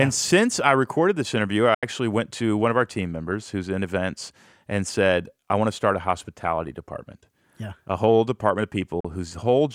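At 1.74 s, after "I recorded this interview", the speech cuts to silence for about 80 ms, and again at 9.00 s, after "whole department of", for about 40 ms. These are likely Bluetooth dropouts. Packets arrived late and were discarded, roughly six and three of them. Unlike an edit, the speech resumes further along, as though it kept playing.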